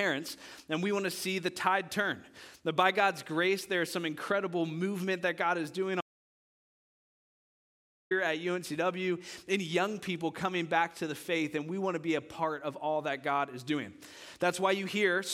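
At 6.01 s the sound cuts off abruptly into an audio dropout to silence, returning mid-flow at 8.11 s. The 2.1-second gap is silent with no room tone, most likely lost input from a disconnected device or failed link while recording continued.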